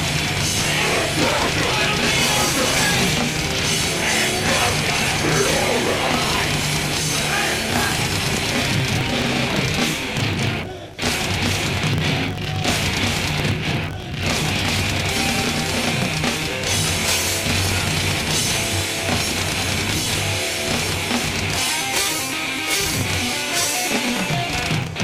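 A filter restarted on every block loses its state throughout, so each block, fitting a 1024-sample size, opens with a transient, heard as a 43.1 Hz buzz tracking the level.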